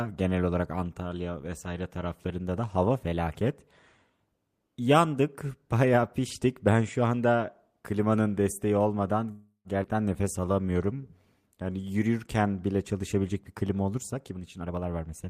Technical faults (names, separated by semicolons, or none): call audio freeze; skip ahead; jitter buffer slow-down; jitter buffer speed-up